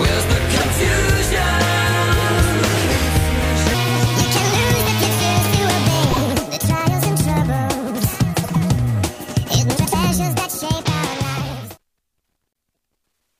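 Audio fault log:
0.57 to 12.74 s, frames out of order: at 0.57, 6.11, 8.43, 9.76 and 12.53 s, two adjacent blocks of 26, 26, 52, 78 and 105 ms swap places, fitting one to four codec frames each. The stretch plays with its halves reversed, giving a garbled flutter, and no time is lost.
3.74 s to the end, section at the wrong speed: from 3.74 s the audio runs 1.55 times too fast, so pitch and tempo rise together by about seven semitones and everything sounds high and hurried. This is likely playback or editing locked to the wrong clock.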